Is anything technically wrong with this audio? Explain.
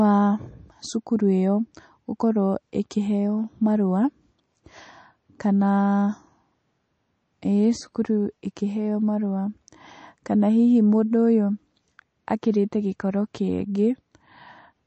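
Yes. Throughout the whole speech clip there is plainly audible damage that points to MP3 compression, likely at a low bitrate in the region of 34 kbps. Nothing is present above 8.3 kHz because the encoder, short of bits, cuts off the treble at that fixed point. It also drops quieter frequency components that switch in and out between frames. The result is dull, band-limited speech with a watery, swirling texture and smeared attacks.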